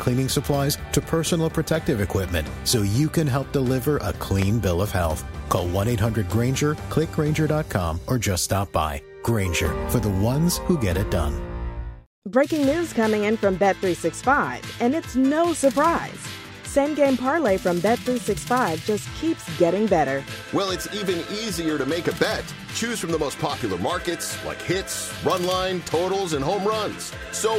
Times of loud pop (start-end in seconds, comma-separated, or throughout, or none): 4.42-4.45, 9.65-9.68